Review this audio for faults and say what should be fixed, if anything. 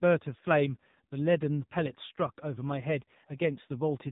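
Throughout, an AMR narrowband mobile codec at a low rate, fitting its 6.7 kbps mode, removes everything above 3.8 kHz and leaves the speech buzzy and synthetic. Route the audio through a wideband or higher-bitrate codec to prevent this.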